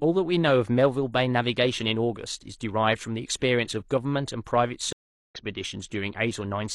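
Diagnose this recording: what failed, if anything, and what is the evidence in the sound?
A stream reconnect failed the speech at the network stage. The audio drops to silence at 4.93 s. The gap lasts 378 ms. Sound returns at 5.35 s, but not where it left off. It picks up roughly 0.4 s further on, so a short stretch of speech is simply missing. The connection broke mid-stream. The player went quiet, reconnected, and started a fresh decoder at the live position rather than resuming the lost segment.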